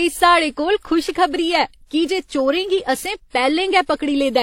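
Throughout the speech, two distinct kinds of compression smear are heard together, and a spectrogram shows a hard ceiling at 16.3 kHz with nothing above. This points to transcoding between lossy codecs, likely WMA re-encoded as low-rate HE-AAC.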